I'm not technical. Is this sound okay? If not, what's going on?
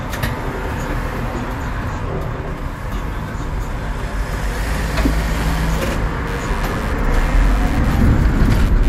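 No. From about 5.2 seconds until the end of the clip, a buzzing, scratchy noise appears underneath the sound. This is computer activity noise: when the computer's processor, graphics card or mouse suddenly works harder, the electrical ground shared with the audio circuitry shifts, and that disturbance leaks into the recording. Here it pulses roughly a hundred times a second and sits well below the main sound.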